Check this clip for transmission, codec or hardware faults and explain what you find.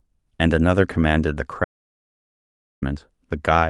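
There's one real fault, sitting inside audio that's clearly been through a call codec, topping out around 12 kHz. From 1.65 to 2.82 s there's an audio dropout to silence: the input most likely got lost while the recorder kept writing zeros, so the speech cuts dead to total silence, with no room tone, for about 1.2 s.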